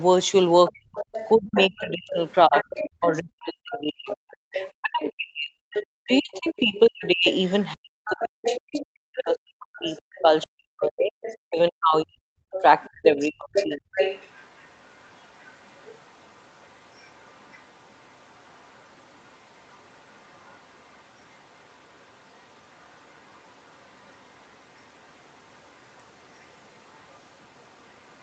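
From 0.66 to 3.18 s, likely incomplete echo cancellation on a loudspeaker device lets the other side's voice leak through, sitting roughly 15 dB under the speech.

From 0.7 to 13.99 s, the echo canceller, likely confused by both sides talking at once, suppressed speech in double talk. The speech dips, dulls and drops out in pieces for about ten seconds in total, falling as much as roughly 40 dB at its deepest.

The leaking voice returns at 3.73 to 5.09 s at a similar level, and at 5.73 to 9.21 s about 10 dB down, the most prominent stretch. It comes back at 9.78 to 10.47 s around 25 dB down and briefly at 11.25 to 11.36 s about 20 dB down. From 12.51 s to the end it is a faint trace roughly 35 dB below, heard through the call's Opus path with nothing above 8 kHz.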